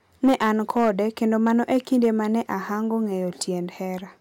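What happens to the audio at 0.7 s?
Hard clipping, running from 0.24 to 0.90 s, covers that moment: the speech is driven about 5 dB past what a stage in the chain can pass, so its peaks are sheared flat, spraying high harmonics that are heard as crackle on the peaks.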